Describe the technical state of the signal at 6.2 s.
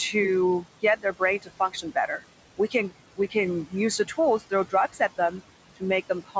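At 6.2 s the noise suppressor is misjudging the signal. Between 6.09 and 6.36 s it treats part of the speech as steady background and pulls it down along with the noise, by as much as about 18 dB at the deepest point. Roughly a tenth of a second of sound in that span is affected, so the end of the clip sounds swallowed and faint, as if the tail of the phrase were partly erased.

The same suppressor is running across the whole clip, including this moment, cutting the room noise by about 18 dB. That noise sits only about 16 dB below the speech, so the suppressor has to work hard. Because it decides band by band and frame by frame, the leftover noise pumps down in gaps and swells back under the speech. The G.722 call path limits everything to below 8 kHz.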